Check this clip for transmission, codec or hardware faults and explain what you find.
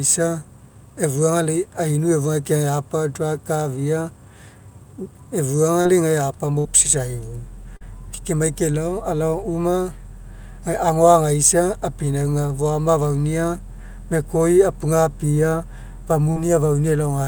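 Packet loss occurs in two forms in this speech recording, both covered over by the receiver's concealment.

Short concealed packet loss occurs at 5.81–5.87 s, 7.77–7.82 s and 16.32–16.47 s. Each time about 40 ms of audio failed to arrive in time, and the decoder extrapolated the preceding sound to cover roughly 30 to 40 ms before crossfading back to real data. The result is a brief smear or wobble where the signal should change. The last event also adds a little extra time.

A burst of packet loss occurs at 6.59–6.67 s, where about 60 ms went missing in one run. The concealment synthesised roughly 58 ms by continuing the last sound while attenuating it, so the gap is heard as a short held buzz or fading hiss. The audio then resumes further along, with the lost stretch absent.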